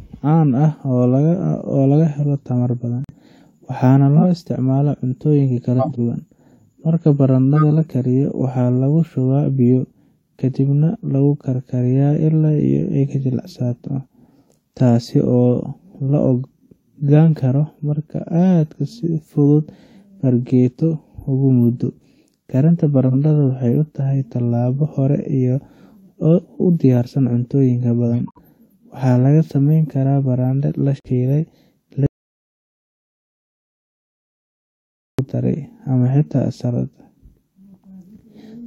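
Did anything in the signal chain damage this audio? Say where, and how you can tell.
Yes, the codec's decoder rejected damaged frames and the player muted them (corrupt frame muted). Abrupt silent holes appear at 3.04–3.17 s after "laga helo tamar badan", at 28.09–28.38 s before "waxaa laga sameeni", and at 30.96–31.08 s.

Other corrupted frames were decoded anyway (corrupt frame decoded), putting energy at wrong frequencies. This causes brief chirps or noise bursts at 4.17–4.23 s, 5.79–5.99 s, 7.56–7.63 s and 23.07–23.15 s.

The input was likely lost while recording continued, so the audio dropout to silence from 32.06 to 35.19 s is about 3.1 seconds of complete silence, without room tone.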